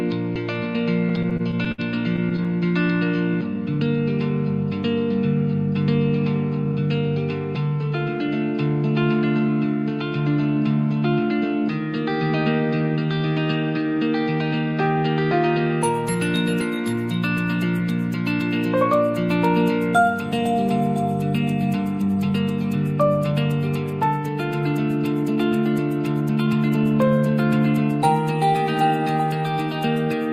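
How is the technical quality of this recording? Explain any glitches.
The recording has two network playback glitches.

From 1.09 to 2.47 s there are repeated stalls (stutter). The jitter buffer kept running empty. Twelve short gaps were filled by extending the last sound. The longest was 66 ms, so the audio drags and stutters.

From 22.02 to 26.77 s there is a jitter buffer speed-up. Tiny pitch-period slices were cut to shrink excess buffering, about 150 ms in all. The audio runs 3% fast at unchanged pitch.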